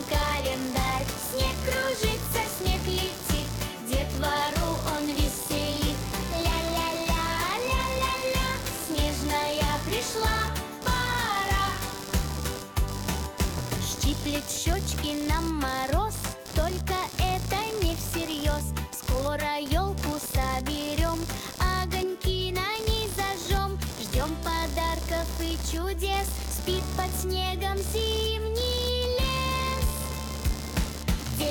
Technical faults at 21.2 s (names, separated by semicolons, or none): computer activity noise